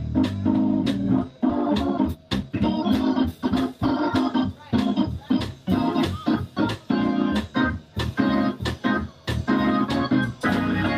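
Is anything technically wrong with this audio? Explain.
Yes, there are two faults close together.

Skip ahead, 1.49 to 1.51 s: the sound jumps abruptly forward with no gap, and roughly a second of material is simply gone. Later audio was already queued, so a whole stretch was dropped and the two sides were butted together.

Jitter buffer speed-up, 1.70 to 4.83 s: playback runs about 7% fast at unchanged pitch and feels slightly hurried. The buffer was holding more audio than its target, so the receiver repeatedly trimmed short pitch-period pieces, about 200 ms in total, to bring the delay back down.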